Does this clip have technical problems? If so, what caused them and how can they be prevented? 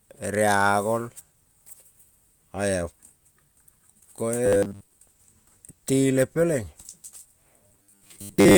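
Yes. Robotic sound from repeated short buffers appears from 4.46 to 4.91 s and again from 7.67 to 8.57 s, where the speech turns into a rigid, metallic buzz at 100 Hz. The likely cause is audio arriving too seldom, so the playback fills the gaps by looping the last 10 ms over and over, replacing most of the real signal during these stretches. Larger jitter buffers and a steadier network or processing load would prevent it.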